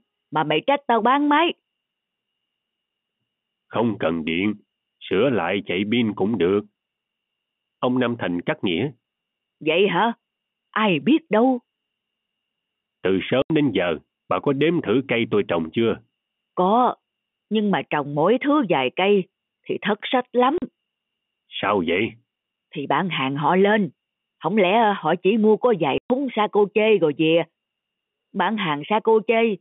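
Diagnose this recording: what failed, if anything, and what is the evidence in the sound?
Packet loss filled with silence at the network stage: speech drops out completely at 13.42–13.50 s, 20.58–20.62 s and 25.98–26.10 s. The 80, 40 and 120 ms holes are multiples of 20 ms, which fits 20 ms packets. The receiver inserted silence, so the waveform flat-lines abruptly and the spectrogram shows empty vertical columns across the whole G.711 telephone band.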